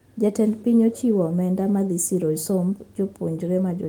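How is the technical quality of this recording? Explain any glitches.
No glitches can be heard anywhere in this recording. Nothing in the speech points to a technical fault in how it was captured or delivered.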